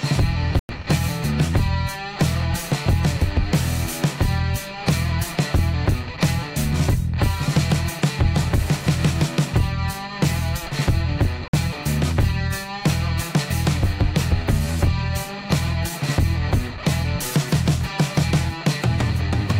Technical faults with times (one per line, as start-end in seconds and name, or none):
0.59-0.69 Bluetooth stall
11.48-11.53 Bluetooth stall